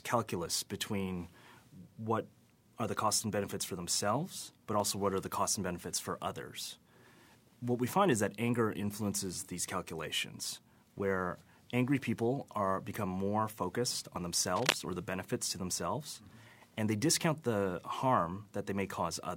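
At 4.8 s, between "benefits for themselves but" and "what are the costs", a dropped buffer (overrun) likely occurred. The samples were overwritten before being read, so about 20 ms of speech vanishes, leaving a small jump. At 14.16 s, right after "are become more focused", a second overrun cuts out roughly 40 ms, giving a longer skip. From 14.55 to 14.75 s, just before "or the benefits to", cable scratch noise is likely from a worn connector whose contact resistance fluctuated. It produces a burst of scratchy rustling about as loud as the speech.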